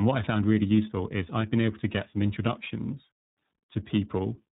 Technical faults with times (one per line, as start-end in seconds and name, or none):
0.00-4.53 tandem speech coding